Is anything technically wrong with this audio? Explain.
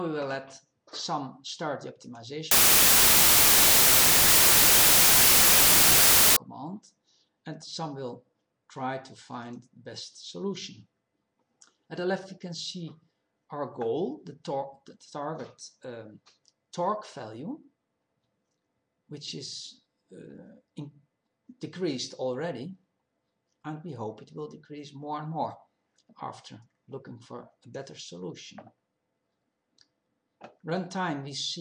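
Yes. From 2.51 to 6.36 s there is a wrong sample width fault: each stored sample is split into two shorter ones, which fits 32-bit data read as 16-bit. Half the values carry the real signal's upper bits; the rest are noise. The sound plays at half speed, an octave low, buried in loud hiss.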